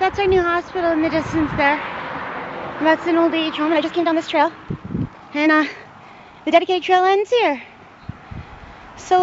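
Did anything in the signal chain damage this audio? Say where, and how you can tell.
Yes. A time-stretched section runs from 3.53 to 6.77 s, where the audio suddenly moves about 1.7 times faster while its pitch stays unchanged, so it sounds choppy and rushed. The likely cause is software processing after capture, at the editing or playback stage, that squeezed the passage to fit a shorter length. It kept the pitch by dropping short slices and joining the remainder, which leaves the hurried, jumpy texture.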